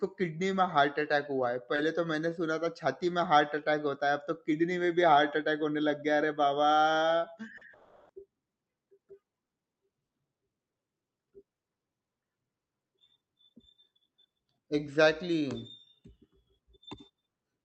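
At 1.76 to 1.80 s, right after "हार्ट अटैक हुआ है" and before "तो मैंने सुना था", the sound turns briefly grainy and noisier for about 40 ms, with no actual gap. This is a lost packet rebuilt from error correction. One packet never arrived, but the next one carried a low-bitrate copy of it, as Opus in-band forward error correction allows. The decoder played that coarser copy, so the hole is filled with a rougher stand-in.

From 7.57 to 11.60 s there are a few brief ticks and smeared hiccups scattered through otherwise clear audio. These are scattered short gaps. Roughly four packets went missing or arrived too late, one here and one there, none longer than about 40 ms. The receiver patched each one by stretching the last sound it had, which together hides only about 4 percent of that stretch.

Inside that stretch, from 7.73 to 8.12 s, the sound degrades into a smeared, buzzy continuation lasting about 0.36 s before normal audio resumes. 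It never falls into silence, because every missing moment was papered over by extending what came before. That pattern points to a likely long network dropout, in which nothing arrived for about a third of a second and the receiver's concealment carried the sound across the whole hole.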